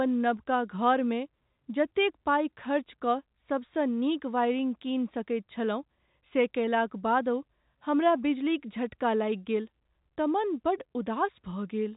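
Nothing's wrong with this bit of telephone speech; it just has the narrow, phone-line sound of G.711 coding, with everything above roughly 3.8 kHz gone, which is exactly what a normal call gives you.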